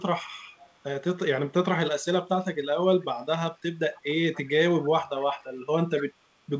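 Short bursts of echo leak occur at 0.57–0.74 s, 4.34–4.42 s and 5.97–6.06 s. A thin copy of the speech returns 274 ms late, faint at first and noticeably louder by the last burst. This is likely far-end loudspeaker pickup slipping past the echo canceller.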